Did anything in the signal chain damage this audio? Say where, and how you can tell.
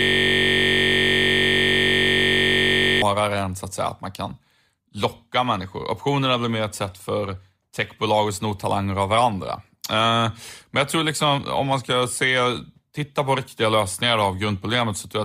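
Yes, a system hang loop at the driver/buffer stage: from the start to 3.02 s, a 21.33 ms chunk repeats as a steady 46.9 Hz buzz, which fits a frozen 1024-sample ring buffer.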